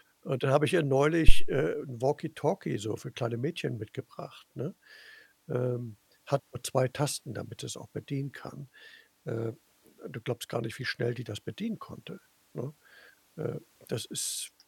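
Phantom power thump at 1.28 to 1.54 s, right after "dann habe ich ihr": a supply switched on or off at the live input sends a voltage step through the coupling capacitors, giving a deep thump that peaks at about -2 dBFS and decays within 57 ms.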